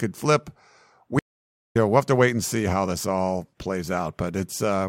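At 1.19 s the speech cuts to silence for about 0.55 s, returning at 1.76 s on "know we'll have to". This is a stream reconnect: the connection dropped, the player went quiet, then reconnected and started a new decoder partway through the live stream. What separates it from an ordinary dropout is the skip in content. The speech picks up roughly 0.7 s further on, so material is missing rather than just paused.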